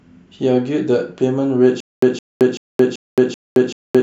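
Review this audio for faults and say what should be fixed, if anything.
Stutter with silent gaps from 1.80 s to the end: the speech stops advancing and a 164 ms fragment repeats six times, each copy followed by about 221 ms of digital silence, so the burst returns every 384 ms. The even pace points to a stalled player or stream that likely replayed its last buffered fragment on each retry before running dry, and the speech that should have filled this stretch is lost. Preventing it means giving the stream enough buffering and network headroom that playback never starves mid-clip.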